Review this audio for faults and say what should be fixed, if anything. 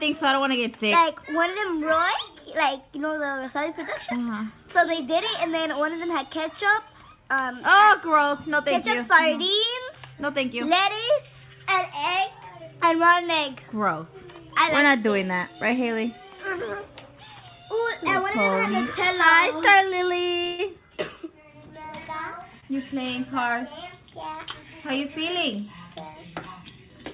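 There is a burst of packet loss from 20.44 to 20.60 s. Packets arrived too late or not at all. The receiver covered a 143 ms gap by extending the last sound and lowering it as the gap went on. That gives a held buzz or a fading hiss, depending on what came before. About 140 ms of real audio is gone, so the sound resumes further along. Fix this by checking the network path for congestion and giving the jitter buffer enough headroom.

A short concealed packet loss follows at 22.60 to 22.64 s. A few hundredths of a second missed the decoder. The receiver filled about 16 ms by continuing the preceding sound, then blended back into real audio. Roughly 20 ms of material is lost, heard as a brief smear or wobble. A short sound there could drop out entirely. Prevent it by adding packet redundancy or forward error correction on lossy links.

Nothing is heard above 4 kHz, which fits a narrowband call codec such as G.711 at 64 kbps.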